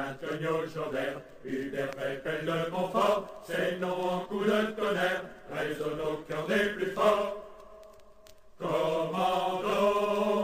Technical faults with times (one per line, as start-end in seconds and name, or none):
none